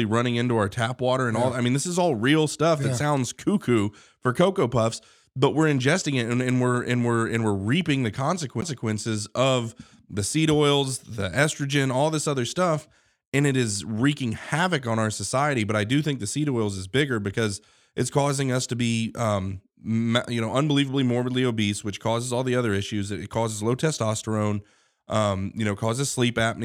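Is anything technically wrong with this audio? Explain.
Yes. At 8.61 s there is a sharp tick and a brief dropout of roughly 10 ms, after which the speech resumes from a different point. This is a CD skip: a knock or disc flaw made the laser jump to another turn of the spiral.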